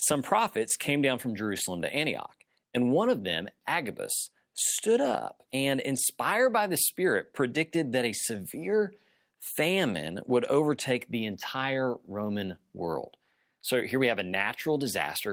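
No technical faults can be heard anywhere in this speech recording. There are no events to place on the timeline.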